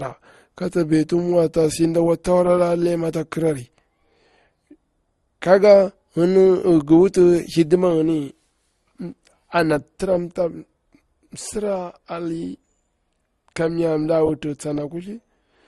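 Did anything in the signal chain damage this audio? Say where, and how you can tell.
Yes, at the codec stage: likely transcoding between lossy codecs, an MP3-then-Opus chain re-encoding old artefacts. Throughout, nothing above 12.1 kHz, with mixed, layered artefacts.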